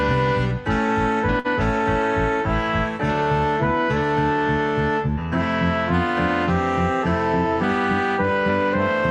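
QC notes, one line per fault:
1.39–1.47 s: short stall from a late packet. A packet missed its playout deadline and the jitter buffer ran dry, so the receiver held the last sound in place for about 53 ms until the packet turned up, then carried on exactly where it left off. Nothing is skipped, but that moment is drawn out, with a faint buzzy or dipped quality, and everything after it plays about 53 ms later than before.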